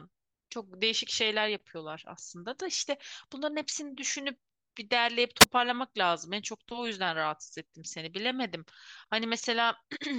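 A speech recording with a wireless microphone squelch dropout between 5.40 and 5.46 s: the faded radio signal lets a hiss rise before the receiver mutes for about 6 ms, showing as a brief broadband smear, then a near-flat gap in the waveform.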